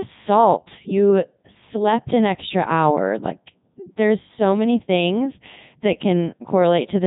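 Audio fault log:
Throughout, Codec 2 vocoder: the speech comes out robotic and buzzy, with heavy damage and nothing above 3.8 kHz, which fits Codec 2 at 3.2 kbit/s. Instead of keeping the waveform, the decoder rebuilds the voice from sine waves driven only by pitch, voicing, energy and a coarse spectral envelope. That resynthesis is what separates it from ordinary low-bitrate or band-limited coding, which smears or muffles speech but never turns it into this synthetic, machine-like tone.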